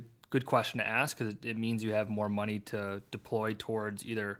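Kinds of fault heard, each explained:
No technical faults detected.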